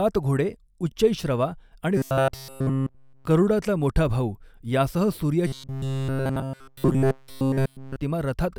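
A playback buffer likely starved, so a roughly 7.5 ms slice was looped in place of fresh audio, giving robotic sound from repeated short buffers: a rigid 134 Hz metallic buzz from 1.97 to 3.25 s, after "घोडे उच्चैःश्रवा आणि" and before "गरूडाचा मोठा भाऊ यांसह", and again from 5.47 to 7.96 s, after "गरूडाचा मोठा भाऊ यांसह".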